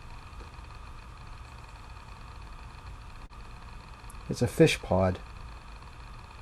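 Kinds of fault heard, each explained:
Short stall from a late packet: at 3.26 to 3.33 s one packet missed its playout deadline, so the jitter buffer ran dry and the receiver bridged the gap by extending the preceding sound for 40 ms. When the packet arrived, playback resumed at the point it had reached, so no audio is lost. Instead, the held sound drags slightly with a faint buzzy, flattened quality, and everything after it plays 40 ms later.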